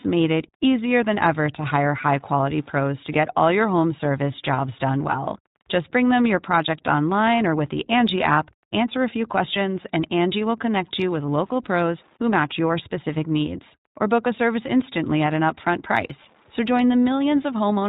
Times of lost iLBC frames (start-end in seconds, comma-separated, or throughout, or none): 11.26-11.29